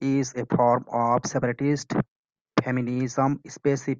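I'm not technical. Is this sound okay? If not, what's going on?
Yes, it sounds fine.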